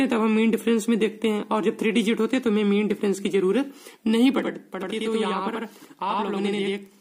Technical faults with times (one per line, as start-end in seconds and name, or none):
4.39-7.00 channel delay (doubling)